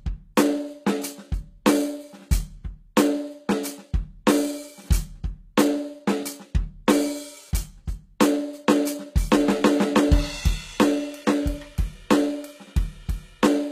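From start to end the music carries plainly audible damage that likely comes from HE-AAC compression at a bitrate near 20 kbps. The treble is rebuilt from copied lower bands, so it sounds bright but gritty and metallic, with nothing above 14.9 kHz.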